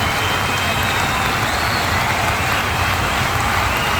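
From start to finish there's a grainy, gritty edge that shifts along with the sound, and anything below one step drops to silence or sputters. It's likely low bit depth without dither, around 6 bits, rounded straight off, leaving error only roughly 20 dB under the signal.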